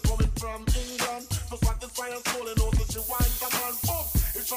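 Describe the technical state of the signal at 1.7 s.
Nothing at 1.7 s points to a technical fault; the signal is intact at that moment.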